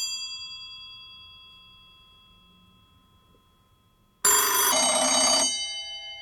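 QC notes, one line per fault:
4.72–6.21 s, section at the wrong speed: from 4.72 s to the end the sound runs at 0.635 times its proper rate, so pitch falls roughly seven semitones while timing stretches. The abrupt, deep, sluggish change is likely a mismatched playback clock.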